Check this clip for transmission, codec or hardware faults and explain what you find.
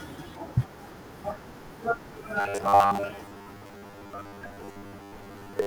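One fault is present: robotic sound from repeated short buffers, running from 2.40 s to 5.66 s. Audio was likely arriving too slowly, so the playback side kept re-sending the last fragment while fresh material was skipped, with around seven tenths of the stretch made of repeats. The repetition imposes a fixed 100 Hz buzz, which fits a 10 ms buffer, turning the speech into a stiff, metallic drone that only loosely tracks the syllables.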